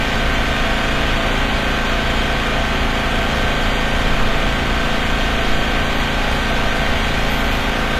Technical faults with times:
0.00-7.99 HE-AAC compression

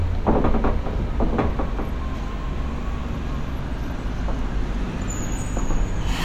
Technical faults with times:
none

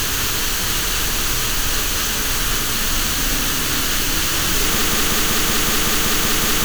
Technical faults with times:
4.82-6.65 broken-record loop

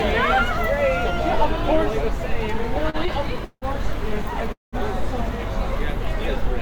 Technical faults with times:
2.83-3.65 repeated stalls (stutter)
4.52-4.76 call audio freeze

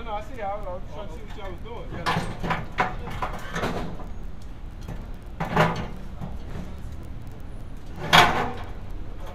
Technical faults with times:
none

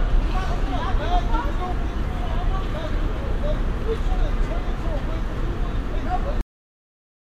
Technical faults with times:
6.41-7.37 cut-off end

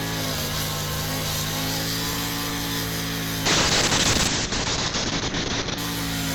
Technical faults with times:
0.00-6.35 block size mismatch (truncated)
3.47-5.84 call bitrate drop

